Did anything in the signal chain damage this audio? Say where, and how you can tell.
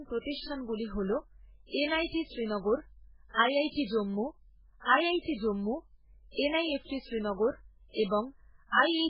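Yes. Throughout the speech the audio carries MP3 compression damage, most likely introduced at the codec stage. Nothing survives above 5.2 kHz, and what remains is heavily degraded: watery, swirling texture, smeared consonant attacks, and chirpy s sounds. That points to a very low bitrate, around 8 kbps, where the encoder cuts the treble and drops weak spectral lines that flicker between frames. A plain low-pass filter or narrowband line would also remove the top, but it would leave no swirling artefacts below the cut-off.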